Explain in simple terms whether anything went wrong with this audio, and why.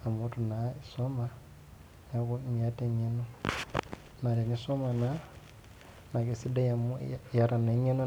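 Nothing went wrong with how this speech was captured or played back, and the faint background sound of the room, which stays well below the voice, is simply part of the space where it was recorded.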